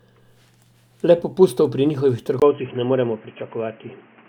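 At 2.40 s, just after "popustov pri njihovih", there is a gap of about 20 ms. After it the speech turns dull and boxy and stays that way to the end. Nothing above 3.2 kHz remains. A new background noise appears, roughly 30 dB below the speech. The loudness stays about the same. This is likely an input switched to a poorer device, such as a headset's call profile, with a narrower band and its own noise.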